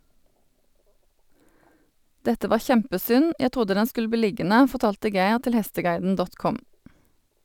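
Throughout the speech, sample clock jitter adds a fine hiss and roughness. The converter's clock wanders by around 2 µs, so samples land slightly off time. The error, roughly 35 dB below the signal, grows on loud, bright passages and disappears in pauses.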